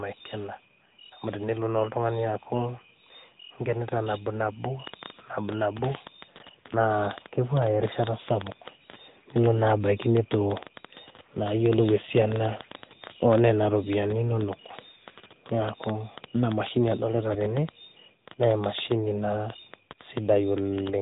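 It's a speech recording squeezed through the AMR narrowband mobile codec the whole way: nothing above 3.8 kHz, and a plainly buzzy, synthetic edge that fits the 10.2 kbps mode. From 4.87 s to 20.88 s there's a train of clicks, around a hundred irregular pops at about 7 per second, peaking roughly 10 dB above the speech, likely from interference or a faulty connection.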